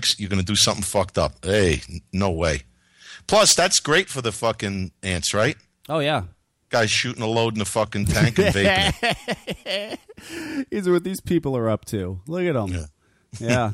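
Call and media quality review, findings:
Hard clipping throughout the speech. Symptom: crackle on louder syllables. Probable component: input gain stage or converter. Mechanism: level about 8 dB over full scale flattens under 1% of samples, adding high harmonics.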